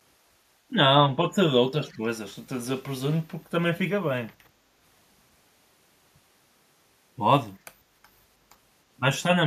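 From 1.89 to 1.98 s, an echo leak. A very faint copy of the speech returns 317 ms late, likely missed by an echo canceller.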